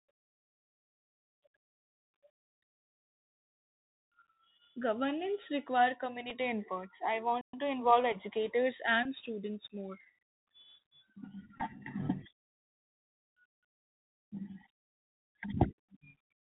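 Across the whole clip the speech carries the sound of the Bluetooth CVSD headset codec. The bandwidth stops near 4 kHz, so the speech sounds narrow and telephone-like. A grainy hiss sits beneath it. Sibilants come out scratchy, and loud high-frequency moments smear because the one-bit delta modulator, running at 64 kbps, cannot raise its step size fast enough to follow them. The codec damage is plainly audible.

At 6.30 s comes the first Bluetooth headset packet repeated event, a brief tick where about 7.5 ms of audio was lost. That fits two 3.75 ms packets, and the decoder filled the gap by replaying the previous packet's bits.

From 7.41 to 7.54 s a playback stall cuts the speech to silence for 120 ms mid-flow before it resumes. The likely cause is the player running short of data or its thread being held up.

Between 9.03 and 9.05 s another packet repeat covers 18.8 ms, consistent with five packets. 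Because the same bits are decoded every 3.75 ms, it comes through as a short buzz near 267 Hz.

From 11.58 to 11.62 s, 26.2 ms of repeated packets are scattered over 30 ms, consistent with seven packets. The longest run is about 15 ms, so the result is a rough buzzy flutter.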